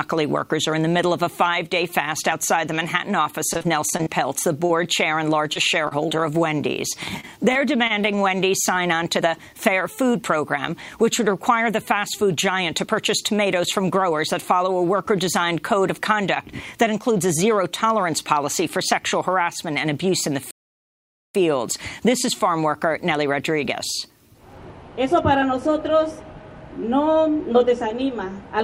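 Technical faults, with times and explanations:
3.53–6.12 s and 7.20–8.05 s, repeated packet loss (robotic sound): short holes, the longest 32 ms and 26 ms, are patched by stretching the last sound, giving a choppy sound with pieces missing.
9.20–10.37 s, jitter buffer speed-up: about 40 ms of pitch-period slices are cut to drain a backed-up buffer, so the audio runs at about 103% speed. The pitch stays the same, which distinguishes it from a resampling error.
20.51–21.35 s, playback stall: the output goes silent for about 840 ms and then resumes, likely because the player ran out of data or its thread was blocked. Unlike packet loss, nothing fills the gap.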